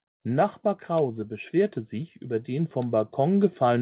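From 0.87 s to the end of the clip, the speech and the background noise beneath it swell together, growing louder over nearly three seconds. This is automatic gain rising: the gain control judged the input too quiet and kept increasing its amplification, lifting everything in the signal together rather than just the voice. Throughout, the band stops at 4 kHz, which fits a G.711 narrowband call path.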